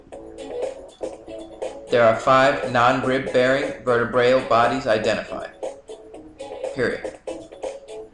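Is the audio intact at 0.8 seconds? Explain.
Yes, the audio at 0.8 seconds is intact, with no dropout, click, distortion or other fault audible at that moment.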